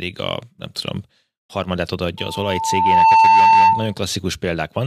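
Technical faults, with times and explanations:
2.17–3.94 s, loudspeaker feedback squeal: right after "a nem tudom harmadát" a steady tone near 895 Hz rises out of the speech, swelling over about a second until it stands roughly 15 dB above it, and holds until it ends at 3.94 s. The microphone is picking up the loudspeaker it drives. At this one frequency each trip around that loop returns more than it sent, so the tone feeds on itself and keeps climbing.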